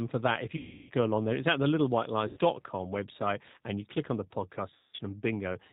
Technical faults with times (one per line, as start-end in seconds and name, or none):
0.00-5.72 G.729 codec
0.57-0.92 VoIP packet loss concealed by the speech codec
2.28-2.39 VoIP packet loss concealed by the speech codec
4.75-5.01 VoIP packet loss concealed by the speech codec